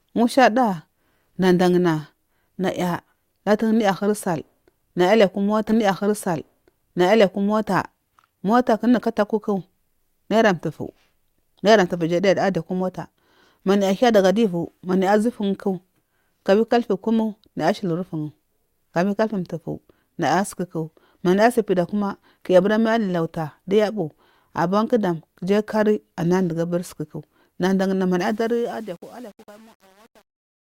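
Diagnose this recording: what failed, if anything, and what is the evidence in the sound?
At 5.69 s the speech jumps back with a small blip, and the stretch up to 7.69 s is heard a second time, adding 2 s. This is a stream segment repeated: during network streaming or playback, the player fetched or queued the same segment twice.

From 28.19 s, just after "susuku dandana", the fade-out, which begins around 28 s, turns gritty, worst from 28.41 s to the end. This is truncation distortion on a fade, at the sample-format conversion stage: a gain stage without dither, consistent with 8-bit resolution, reduced the quiet tail to a few coarse steps.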